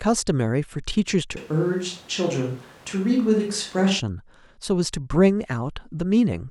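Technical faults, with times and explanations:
1.37 to 4.0 s, switch to a distant microphone: the speech suddenly goes roomy and hollow, loses its low end, and picks up more background, with the room noise sitting roughly 25 dB under the speech. It snaps back just as abruptly at 4.0 s. The overall level barely changes, so it's the tone and room sound that give it away. The likely cause is the close mic dropping out and the recording falling back to one further off.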